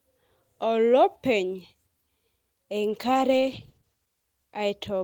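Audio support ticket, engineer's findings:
Speech turns rough and muffled, 2.88 to 4.75 s, worst for about 1 s. Call bitrate drop: encoder starved, top end cut, consistent with roughly 32 falling to 14 kbps.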